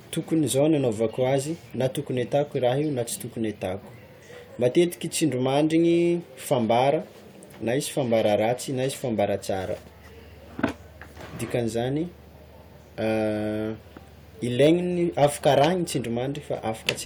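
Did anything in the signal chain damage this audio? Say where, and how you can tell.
Yes: hard clipping at a converter or other gain stage, overdriven by about 3 to 9 dB, squares off peaks at 14.62–14.72 s, 15.23–15.66 s and 16.89 s, heard as harsh crackle.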